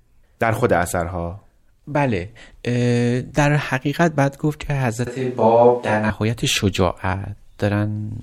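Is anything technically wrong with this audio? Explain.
Yes. From 5.07 to 6.10 s, the speech suddenly turns roomy and hollow, with thinner bass. This is a switch to a distant microphone. The close microphone likely dropped out, leaving a farther one. Loudness barely changes. Room noise sits roughly 35 dB below the speech. The return is equally abrupt.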